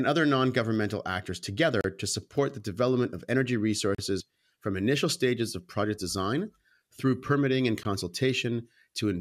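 At 1.81 s, 3.95 s and 7.83 s the speech breaks into brief silences of about 32, 36 and 17 ms. These are gaps at a join of encoded pieces: encoder start delay and last-frame padding were left in. Unlike a dropout, nothing is lost, and the speech resumes exactly where it stopped.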